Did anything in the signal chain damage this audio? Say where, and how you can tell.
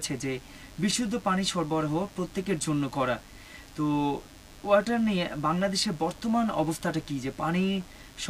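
Yes: DECT cordless phone buzz runs through the whole recording, entering at the analogue stage, where a nearby DECT phone or base station's 100 Hz radio bursts are rectified by the audio circuitry. It sits roughly 30 dB under the sound. A spectrogram shows a comb of lines at 100 Hz multiples, and the waveform shows a regular 10 ms spike pattern.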